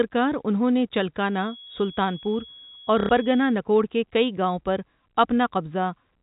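From 1.25 s to 3.59 s a thin, steady whistle at 3.3 kHz sits behind the speech, about 25 dB below it and swelling and fading slowly in level. This is a feedback whistle. The likely cause is a loudspeaker-to-microphone loop running just at the edge of instability, so a single frequency keeps ringing without building into a howl. It stays inside the telephone band, so the 4 kHz limit of the G.711 coding leaves it intact.

At 3.00 s, while the whistle is still present, the speech stutters for 90 ms, ending at 3.09 s, with a brief robotic buzz. This is packet loss with the last packet repeated. Audio went missing, and the receiver kept replaying the final piece it had until fresh data arrived. That fits three lost 30 ms packets, which gives a buzz near 33 Hz.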